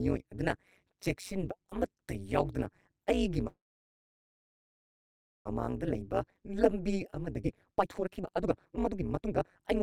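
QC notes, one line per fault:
throughout: overlap-add ripple. Frames were windowed and rejoined with an overlap whose gains don't sum evenly, so the level swings by about 60 dB once per frame, around 200 times a second, giving the speech a harsh, robotic buzzing tremolo.
3.47–5.47 s: call audio freeze. Packets likely stalled in transit and the jitter buffer drained; the last sound carries on briefly as a fading buzz or hiss, then about 1.88 s of silence. Playback resumes where it stopped, adding roughly 2 s of delay with nothing lost.
5.87–9.82 s: jitter buffer speed-up. The buffer held excess audio after the stall, so the receiver repeatedly cut short pitch-period pieces, roughly a second and a half in total. Speech runs at 143% speed without a pitch change and sounds hurried.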